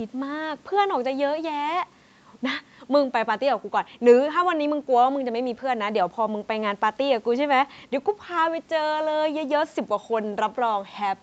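No faults heard in this speech; the call microphone processing is working normally, its high-pass filter trimming the lowest bass and nothing present above 8 kHz.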